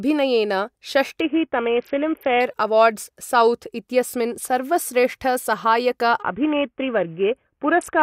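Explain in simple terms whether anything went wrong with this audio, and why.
A Bluetooth SBC bit pool drop, at 1.21 to 2.40 s and 6.22 s to the end: a squeezed wireless link starved the speech of data, leaving it dull and gritty.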